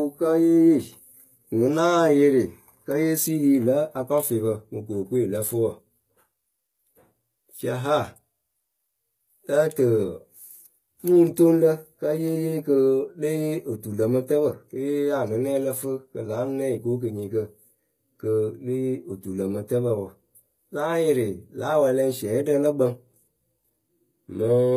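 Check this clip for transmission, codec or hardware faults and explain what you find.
One codec fault runs through the whole recording. The speech was likely passed through HE-AAC compression at a very low rate, which fits something around 20 kbps. The encoder kept only the lower spectrum and rebuilt the treble by spectral band replication, copying lower bands upward under a coarse envelope. Those invented harmonics fail to line up with the real ones, so s sounds come out gritty and lispy, the damage is plainly audible, and nothing survives above 14.9 kHz.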